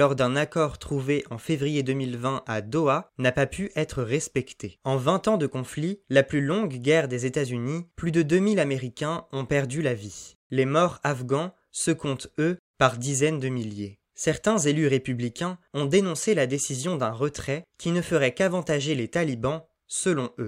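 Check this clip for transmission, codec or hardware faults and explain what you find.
No fault can be heard anywhere in the speech. There is nothing to place in time or trace to a cause.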